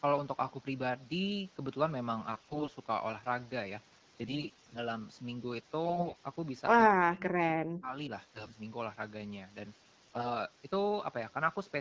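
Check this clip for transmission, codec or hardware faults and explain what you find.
Two faults appear in the speech: repeated AMR bit errors and, once, speech suppressed in double talk.

AMR bit errors occur at 2.31 to 2.70 s, 4.21 to 4.78 s, 5.86 to 6.18 s, 8.33 to 8.56 s and 10.05 to 10.30 s. The voice keeps roughly its pitch and loudness but turns hoarse, scratchy and gargly. The burst near 2.3 s is worst, and the ones around 8.3 s and 10 s are milder. A weak radio link flipped bits in the less protected parts of each frame, while the check on the essential bits still passed. The decoder therefore rebuilt speech with misplaced excitation pulses and slightly wrong pitch, gain and spectral values. On a spectrogram the harmonic stripes blur into noisy smears, while the waveform envelope stays almost intact.

Between 6.89 and 8.10 s the voice dips sharply, losing its top end or breaking off in pieces. 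For roughly a second of that stretch it falls by as much as about 40 dB. This is speech suppressed in double talk. The likely cause is the far side speaking at the same time, so the echo canceller could not separate the talker from loudspeaker echo and attenuated everything. The waveform shows chunks of the envelope collapsing toward silence, and the spectrogram shows energy, especially high frequencies, dropping out in patches.

The wideband character, with content up to about 7 kHz and light coding texture, points to AMR-WB at 12.65 kbit/s.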